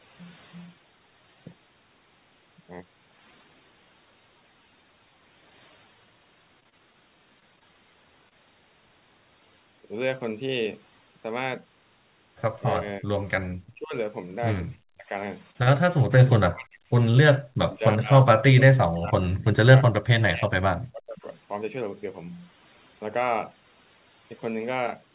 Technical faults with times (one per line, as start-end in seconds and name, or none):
0.00-25.15 overdone noise removal
6.60-7.63 repeated packet loss (robotic sound)
8.29-8.33 short concealed packet loss
12.79-13.09 speech suppressed in double talk
13.75-13.95 speech suppressed in double talk
14.85-15.10 speech suppressed in double talk
15.51-15.69 short stall from a late packet
16.26-16.86 speech suppressed in double talk
17.11-17.16 short stall from a late packet
17.63-21.26 speech suppressed in double talk